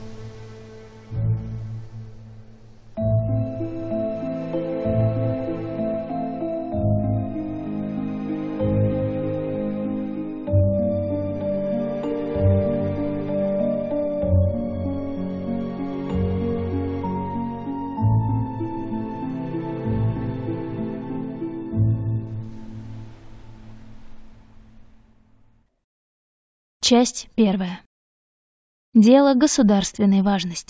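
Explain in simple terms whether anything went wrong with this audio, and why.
Nothing went wrong: no technical faults are audible anywhere in the recording.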